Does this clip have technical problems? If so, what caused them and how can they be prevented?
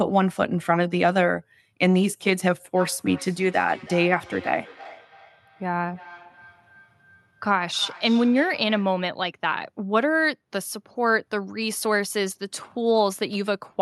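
Yes, there's a feedback echo between two devices from 2.76 to 9.05 s. The speech keeps coming back roughly every third of a second, thinner and more ringing each pass, peaking at about 20 dB below the direct sound. Two devices in the same room were on the call, one mic picked up the other's speaker, and each echo canceller only knew about its own playback. To prevent it, keep one device per room, or mute the second device's mic and speaker.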